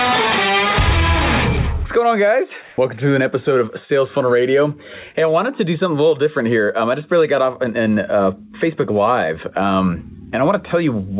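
From 2.62 to 2.78 s, a 160 ms stretch of the quiet background, sitting about 30 dB below the loud parts, turns into a smooth, featureless hiss, almost level with it (about 1 dB change). This is likely comfort noise in place of the background: the sender paused transmission and the receiver synthesised shaped noise. On a spectrogram the gap shows as uniform, textureless noise, ending at the same 4 kHz ceiling seen across the clip, which fits G.711 narrowband.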